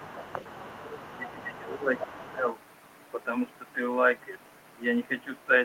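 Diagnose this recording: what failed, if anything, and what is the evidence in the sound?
Other side's voice leaking through, from 0.0 to 1.59 s and again from 1.96 to 2.33 s: a second talker sits under the speech, roughly 20 dB down at first, then louder, near 10 dB down. This is a call-processing fault, most likely residual loudspeaker echo the canceller failed to subtract.

Speech suppressed in double talk at 0.33 to 0.41 s, 1.17 to 1.91 s, 2.09 to 2.14 s and 2.32 to 2.45 s: the near talker dips by around 10 to 15 dB, longest near 1.2 to 1.9 s. This is likely the echo canceller's suppressor clamping down while both sides spoke.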